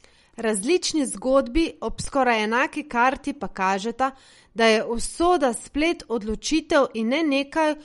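Throughout the speech, the treble stops abruptly at 11.2 kHz and the sound turns watery and swirly, with smeared attacks. This is likely MP3 compression at a low bitrate, around 48 kbps. A spectrogram shows a hard ceiling at 11.2 kHz and flickering, patchy high-frequency blocks.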